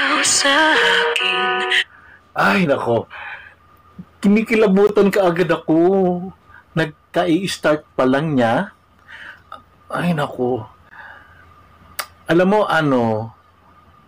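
At 4.87 to 4.89 s and again at 10.89 to 10.91 s, the sound stops dead for 20 ms, then picks up where it left off. This is a gap between chunks: the audio was delivered in 6-second pieces, and silence was inserted at each join. Unlike a dropout, nothing is missing; the sound is only delayed. The holes have hard edges and fall exactly 6 s apart, a regular spacing that a random network loss would not produce.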